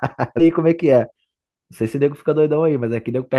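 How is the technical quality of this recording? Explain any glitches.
The recording has two timing faults close together near the start of the speech.

At 0.39 s there is a skip ahead. A stretch of roughly 0.4 s of audio was discarded, either lost in transit or dumped by an overflowing jitter buffer, while later audio was already queued. Playback jumps straight to that later audio, and the two edges are butted together with no filler. That is what separates it from a dropout: there is no silent gap or concealment noise, just an abrupt splice where a chunk of speech vanishes.

From 0.51 s to 2.39 s comes a jitter buffer speed-up. The buffer was holding more audio than its target, and the receiver trimmed the excess by repeatedly cutting out short slices one or a few pitch periods long, removing roughly a fifth of a second in total. The speech plays about 11% fast and sounds rushed. The pitch stays where it was, which distinguishes it from a sample-rate mismatch, where the voice would also rise in pitch.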